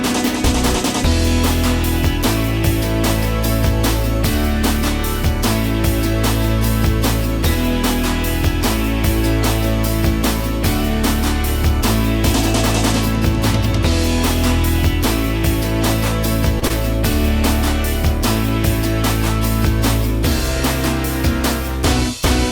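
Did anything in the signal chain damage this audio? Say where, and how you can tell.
Yes. Short concealed packet loss on the network path at 16.59–16.64 s and 16.68–16.72 s: about 20 ms went missing each time, and the receiver extrapolated the preceding sound, leaving two brief smears.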